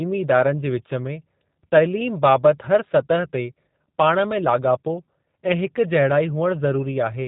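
From start to finish the speech sounds slightly rough and synthetic, with a buzzy, processed edge and a dull top where nothing above about 3.8 kHz survives. This is plainly audible damage from the G.729 codec (the G.729A variant): each short frame of speech is rebuilt from a vocal tract filter, a pitch predictor and a handful of coded pulses rather than the original waveform. That coarse rebuilding fits an 8 kbit/s VoIP codec.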